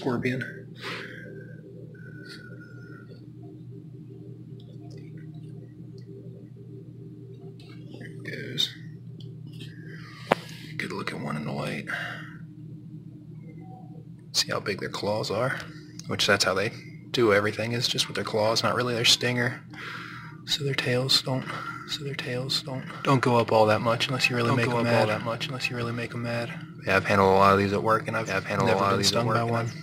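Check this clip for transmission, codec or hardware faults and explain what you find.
One fault is present: a doubled audio track from 21.42 s to the end of the clip. A second full-band copy of the sound cuts in abruptly, trailing about a second and a half behind and roughly 5 dB quieter, likely because a slower path captures the same audio again. Unlike an echo or reverb, it never decays and carries no room colour.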